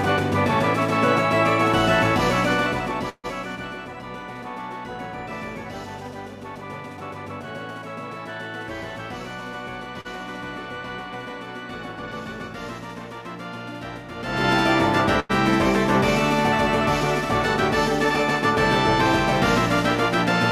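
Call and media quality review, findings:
Call audio freeze, 3.09 to 3.26 s. About 140 ms gap in which the last sound is carried on as a decaying buzz or hiss that falls to roughly 40 ms of silence. Playback then resumes where it stopped, with nothing lost. Likely a network hold-up draining the jitter buffer, with receiver concealment filling the gap. It differs from a late-packet stall because it is longer and the fill fades out fully, rather than simply holding one sound.

Short stall from a late packet, 10.01 to 10.07 s. The sound is held about 40 ms too long with a slight buzz or dip, then continues with nothing missing. The jitter buffer briefly ran empty and the receiver stretched the last frame.

Short stall from a late packet, 15.20 to 15.31 s. Same mechanism, with a hold of about 100 ms and a slight buzz or dip. Both differ from the freeze in that the stretched sound never decays to silence.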